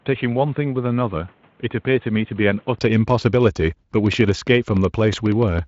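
From the start to 2.79 s the speech is dull and boxy, likely an input switched to a poorer device: the spectrogram shows nothing above 3.8 kHz, the waveform sits about 5 dB lower, and a noise floor roughly 35 dB down appears. From 4.06 to 5.60 s a train of clicks, about 7.9 per second at irregular spacing and roughly fifteen in all, shows as sharp vertical lines and spikes peaking a little above the speech. This is likely interference or a faulty connection. The band then reaches 7.6 kHz, as the Speex codec at 23.8 kbps allows.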